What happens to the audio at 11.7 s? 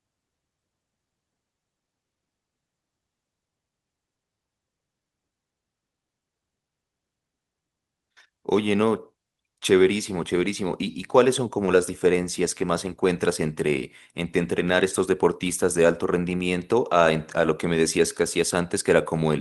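A short concealed packet loss occurs at about 11.65 to 11.69 s. Roughly 20 ms of the speech arrived too late for the decoder, so the receiver invented a 20 ms stand-in by carrying the preceding sound forward, following its pitch where voiced or as shaped noise where not, and then crossfaded back into the real signal. The result is a brief smear or wobble in the speech, and any very short consonant falling in that gap can drop out.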